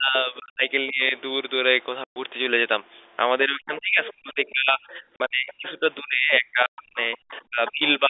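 From 0.0 to 0.72 s, 0.88 to 1.14 s, 3.45 to 6.99 s, 7.23 to 7.82 s and 7.99 to 8.1 s, the speech sinks by up to about 40 dB, likely speech suppressed in double talk.

Packet loss filled with silence leaves dead holes at 0.40 to 0.54 s, 2.04 to 2.16 s, 5.16 to 5.20 s and 6.66 to 6.78 s. Their lengths fit 20 ms packets, and unlike suppression the edges are hard.

A faint second voice, likely the other side's voice leaking through, surfaces about 15 to 25 dB down at 4.06 to 4.13 s, 7.15 to 7.42 s and 7.67 to 7.89 s.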